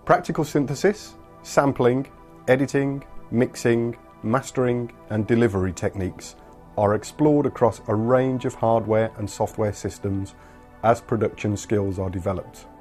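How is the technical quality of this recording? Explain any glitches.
No glitches turn up here at all; it's a smooth listen with nothing technical getting in the way.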